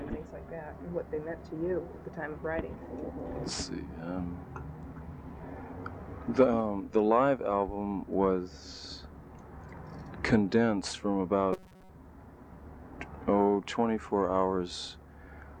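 From 11.53 to 11.89 s the sound collapses into robotic sound from repeated short buffers: a rigid, metallic buzz pitched at 188 Hz that only loosely tracks the underlying audio. The likely cause is fresh audio arriving too seldom, so a stretch of roughly 5 ms gets looped to fill the gap, with most of the span, around two thirds or more, being repeats rather than real audio. Unlike a dropout or stutter, nothing goes silent and no audible jump back occurs; instead a buzz at a fixed rate is imposed on the sound.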